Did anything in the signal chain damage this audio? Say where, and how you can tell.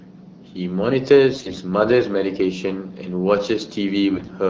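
Yes, AMR bit errors on the network link, at 1.33–1.59 s and 4.14–4.33 s. The speech turns hoarse and gargly while pitch and level hold, unlike packet loss, which would mute or smear. Corrupted low-priority bits are misplacing excitation pulses and skewing fine parameters beneath the light, clean AMR-WB coding.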